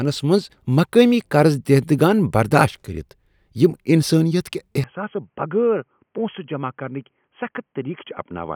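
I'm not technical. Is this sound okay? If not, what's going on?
No. At about 4.84 s the recording likely switched to an input switched to a poorer device, such as a headset. From then to the end, the speech sounds dull and boxy, with nothing above 3.3 kHz, noticeably quieter, with a faint new background noise.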